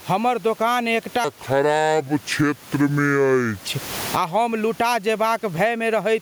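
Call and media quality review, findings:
Gain pumping throughout: level swing about 20 dB, dynamics squashed; likely input gain set too high with a fast limiter or compressor clamping every peak. Room noise, 33 dB below speech.

Section at the wrong speed, 1.24 to 3.67 s, right after "हमर दोकान एकटा": speech slowed to 0.662x, pitch about seven semitones low, deep and dragging; likely playback or editing against a mismatched clock.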